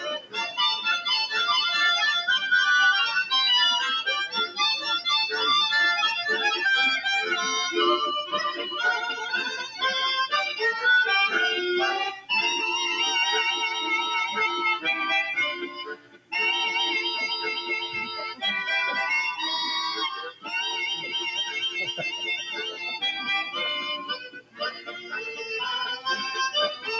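A noise suppressor applied to music or sounds stays engaged for the whole clip. Built for speech, it treats sustained tones, ambience and decay tails as noise and pulls them down while transients pass. The gain it applies swings by around 10 dB, so the level pumps and the body of held material thins. The call microphone processing's band limit means nothing is heard above 8 kHz.

Sound cut by the noise suppressor appears as distinct drops at 0.0–0.59 s (about 17 dB), 9.64–9.82 s (about 6 dB), 12.14–12.3 s (about 14 dB), 15.54–16.33 s (about 18 dB), 17.59–18.43 s (about 12 dB), 20.19–20.53 s (about 15 dB), 21.9–22.88 s (about 8 dB) and 23.97–25.46 s (about 18 dB). In each, the suppressor misreads steady or fading content as noise, sinking it or truncating its decay. The longest, deepest dip is near 24–25 s.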